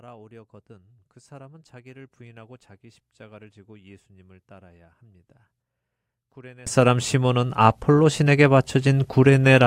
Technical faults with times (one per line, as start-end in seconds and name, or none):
0.00-6.67 one channel inverted